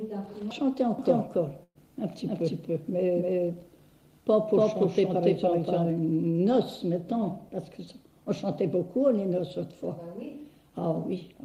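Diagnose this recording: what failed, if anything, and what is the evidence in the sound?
From 0.99 s to 5.90 s a second full-band copy of the audio runs roughly 300 ms behind, about as loud as the original, with no decay or room colour, appearing and vanishing abruptly. This is a doubled audio track, likely from a slower second capture path or an edit holding two copies out of step.

At 1.63 to 1.78 s the last sound is held and fades away, with about 30 ms of silence, before the audio jumps ahead. This is a burst of packet loss on the network: the receiver filled a 115 ms gap by concealment, and 120 ms of audio is missing.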